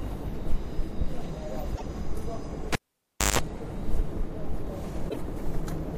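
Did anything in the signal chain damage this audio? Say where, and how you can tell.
Yes, two stages left audible damage.

At 1.74 to 1.82 s and again at 5.08 to 5.17 s the audio skips forward, and each jump is followed by a garbled stretch of about 80 ms, roughly three 26.1 ms frames. That pattern points to the codec stage, most likely a broken MP3 bit reservoir. Frames were cut out of the stream, and the frames that followed went looking back for borrowed data and decoded someone else's bytes until the stream resynchronised.

From 2.73 to 3.39 s a cable was pulled and plugged in somewhere in the analogue wiring. A pop opens the event, then the signal drops to near silence for about 0.61 s. Within that gap comes roughly 157 ms of 50 Hz mains buzz while only the plug tip was making contact, and a second pop as the sound returns. The pops are the step change of a live connection breaking and remaking.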